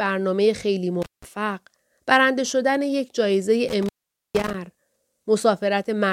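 At 1.02 s the speech cuts out through an intermittent contact. A loose cable or plug opens the line for about 170 ms. Crackle marks the edges of the gap, and faint hiss remains while the connection is broken. The sound returns by 1.24 s. The same fault recurs at 3.69 s, with a longer break of about 460 ms. The contact scratches as it opens and closes, and the signal is restored by 4.54 s.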